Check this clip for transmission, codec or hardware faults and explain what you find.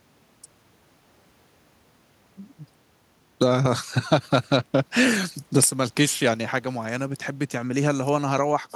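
Nothing turned up here: the speech comes through steady the whole way, with no transmission, codec or hardware problems to point to.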